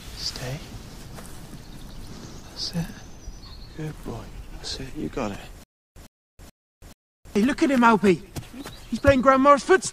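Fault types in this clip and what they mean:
Stutter with silent gaps, 5.64–7.36 s: a likely stalled stream replays a 104 ms fragment four times, each followed by 326 ms of digital silence.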